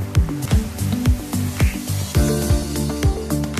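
At 0.44 s and again at 2.49 s, a brief blip cuts through the sound. Each is damaged data in a compressed stream. Corrupted bytes make the decoder misread those frames. It loses sync and hunts for the next valid frame header.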